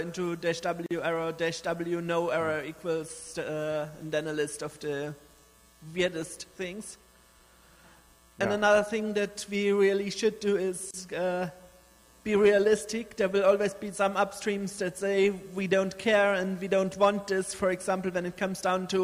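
Two short dropouts cut into the sound. The first runs from 0.86 to 0.91 s, a silence of about 45 ms. The second runs from 10.91 to 10.94 s, about 31 ms. They're 10 s apart. Each is a gap at a join of encoded pieces. The audio was encoded in chunks and stuck back together without trimming, so each encoder's start-up delay and last-frame padding stay in as dead air. You hear a short hole with smeared edges, and then the sound picks up right where it left off.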